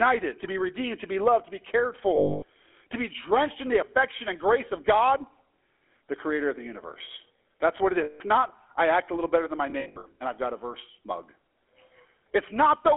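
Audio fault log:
Throughout: GSM full-rate codec. The speech passes through the old 13 kbps GSM full-rate coder over a telephone band of roughly 300 Hz to 3.4 kHz, so everything above that is gone and the low end is thin. The coder rebuilds the voice from a vocal-tract model excited by a sparse, regularly spaced pulse train, which leaves a plainly audible buzzy, gravelly roughness and makes the voice sound coarse.
2.16 to 2.44 s, 8.04 to 8.21 s, 9.70 to 10.07 s: lost GSM frames. After "loved to be cared" and before "to be drenched in", about 260 ms drops out. After "what it" about 160 ms goes, and after "little better than my", ahead of "and I've got a", about 220 ms of losses are scattered over roughly 360 ms in short runs, the longest around 70 ms. The decoder fills each gap by repeating the last good frame's settings. The last sound hangs on as a rough metallic ring.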